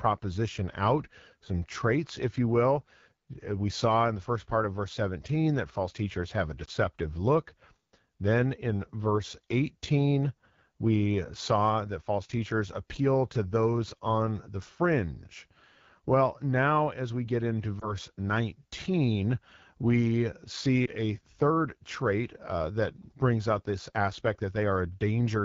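Throughout, the AMR wideband (HD Voice) codec runs at 8.85 kbit/s, a low rate that leaves speech raspy; spectrograms show hazy noise-like fill above 6.4 kHz.

Lost AMR speech frames, one 20 ms frame each, occur at 6.65–6.70 s after "false teachers have a", at 17.79–17.93 s after "as we get into", and at 20.86–20.90 s before "a third trait uh". Each time, the decoder reuses the previous frame's settings with falling gain, giving a brief dip or warble that appears as a short amplitude notch in the waveform.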